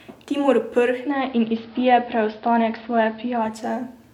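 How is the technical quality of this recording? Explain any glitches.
The recording has one glitch, from 0.85 s to 3.64 s: digital radio blending to analogue. The receiver lost its digital stream and cross-faded over about 0.3 s to the station's AM broadcast, then back. During that stretch the level shifts by about 1 dB, and a faint hiss sits roughly 35 dB below the signal.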